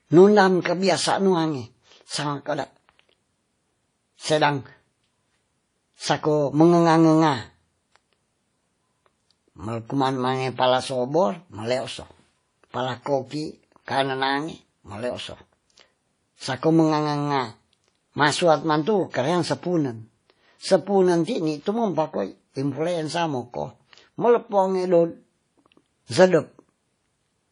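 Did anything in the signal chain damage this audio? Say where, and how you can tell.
Yes: low-bitrate audio saved at a high bitrate, throughout, codec stage. Nothing above about 10.1 kHz, likely from an earlier low-bitrate encoding that the higher-bitrate MP3 cannot restore.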